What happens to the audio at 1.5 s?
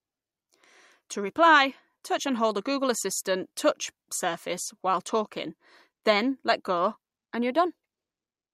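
At 1.5 s the speech carries on intact, with no dropout, click or other fault at that moment.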